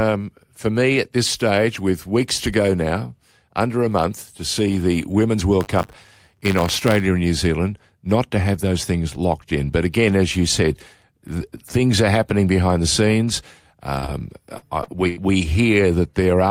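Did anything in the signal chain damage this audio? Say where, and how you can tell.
Yes. Buffer tearing at the driver or buffer stage runs from 5.6 to 7.0 s, heard as a steady 100 Hz robotic buzz riding on the speech. That rate fits a 10 ms buffer period. The writing program and the hardware reader have drifted until they cross in each period, so a small sliver of every buffer, roughly a few percent, replays audio about 30 ms old. The hard joins on either side produce the rattle.

Short concealed packet loss on the network leg appears at 13.99, 14.06, 14.58 and 14.84 s. Each is a brief smear or wobble where about 20 to 40 ms of audio never arrived in time. The receiver's concealment stretched the preceding sound to cover each hole, then crossfaded back into the real signal. Because these gaps cluster within about a second, the passage sounds wobbly rather than cleanly cut.

A burst of packet loss follows at 15.08 to 15.18 s, about 80 ms missing in one run. 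Here concealment had to bridge a longer hole, so the last sound is held and steadily turned down as the gap goes on, giving a fading buzz or hiss for roughly 86 ms. The speech then resumes further along, with the intervening stretch simply absent. This fits network loss during the same spell as the shorter dropouts.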